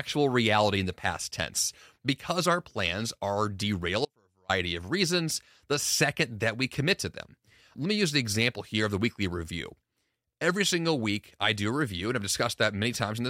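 A likely break in the signal path after "our plans are" causes an audio dropout to a faint residue from 4.05 to 4.49 s, leaving only faint sound about 35 dB down before "of reasons the second".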